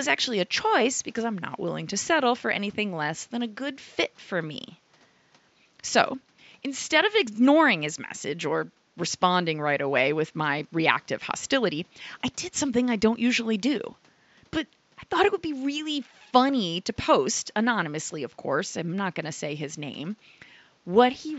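Nothing goes wrong anywhere in this speech recording, and the only thing in the background is the ordinary noise of the room, sitting about 38 dB below the talking.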